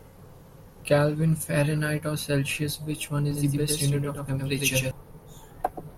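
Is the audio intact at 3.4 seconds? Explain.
No. A doubled audio track runs from 3.31 to 4.91 s: a second copy, roughly 5 dB quieter and about 100 ms late, likely from a slower capture path, abruptly starts and stops.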